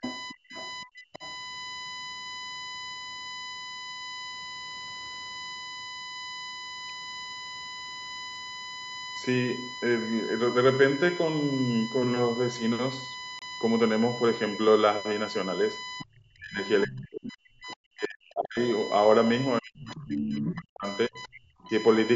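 A steady USB whine at 1 kHz runs throughout. It is strongest at its 2 kHz harmonic and only about 15 dB below the speech. This points to USB frame-rate current leaking into the audio path through power or ground.

From 0.0 to 1.22 s the speech is pushed down hard, by roughly 35 dB at its deepest. From 0.02 to 1.34 s a second voice comes through about 15 dB under the talker. This is speech suppressed in double talk together with the other side's voice leaking through. The likely cause is an echo canceller that could not separate the near talker from loudspeaker echo while both ends spoke.

At 13.39 s a 28 ms Bluetooth dropout leaves a hole of silence, and the sound resumes as if it had played on. The gap fits two lost frames, likely packets that reached the headphones too late.

The leak and suppression return later in the clip. The far-end voice comes through at 15.98 to 16.2 s, roughly 20 dB down, and at 17.23 to 17.76 s, roughly 15 dB down. 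At 19.96 to 20.53 s it is only about 5 dB below the talker, and it leaves faint traces at 21.26 to 21.69 s. Meanwhile the talker is pushed down, by up to about 40 dB, across 16.03 to 18.59 s and 19.6 to 21.71 s.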